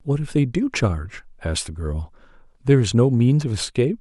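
No technical faults can be heard anywhere in the speech.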